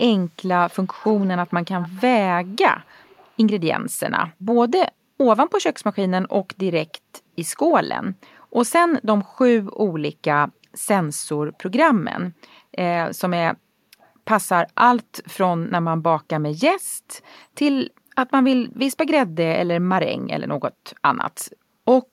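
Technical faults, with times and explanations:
0.70–0.76, 1.01–1.23, 1.47–1.51, 1.81–2.01, 2.84–3.32, 14.01–14.10 and 17.24–17.35 s: echo leak. A faint copy of the speech returns 315 ms late, in short scraps, from roughly 20 dB below the speech down to about 40 dB below. The likely cause is an echo canceller on a far-end loudspeaker that did not fully remove its microphone pickup.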